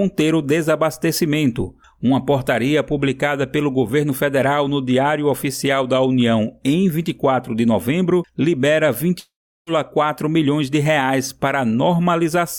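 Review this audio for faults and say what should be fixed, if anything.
From 9.19 to 9.70 s the sound fades into a buzz or hiss, then silence, returning with about half a second lost: likely a long network dropout. A larger jitter buffer, packet redundancy or retransmission, and a more stable network link would stop this stretch from going missing.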